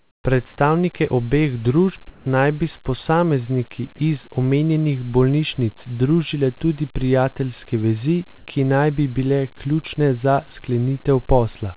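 From 0.00 to 0.24 s the real room background is replaced by flat, featureless hiss about 22 dB quieter, again from 2.10 to 2.26 s about 3 dB quieter, and from 8.38 to 8.46 s about 7 dB louder. This is likely comfort noise in place of the background, filling a transmission pause. Unlike a dropout, the level steps but never falls to silence.

From 3.96 to 3.98 s, about 10 ms of the speech itself gives way to that same steady noise. This is likely sound dropped by the voice detector, which mistook the speech for background. It differs from comfort noise because actual sound is lost, not just room ambience.

The band stops at 4 kHz, which fits a G.711 A-law call path.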